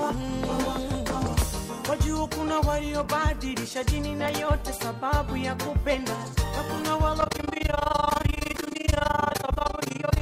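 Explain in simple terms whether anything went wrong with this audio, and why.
From 7.21 seconds to the end, the sound flutters with a rough tremolo. This is overlap-add ripple: badly rejoined audio chunks make the level pulse about twenty times a second.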